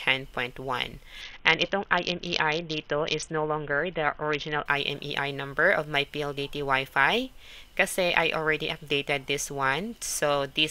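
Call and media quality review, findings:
Treble dulls, gritty grain over the sound, 1.21 to 4.66 s, clears after. Bluetooth SBC bit pool drop on a congested link. Encoder starved top sub-bands and coarsely quantised the rest, which fits a bit pool cut from 28 to 6, near 60 kbps.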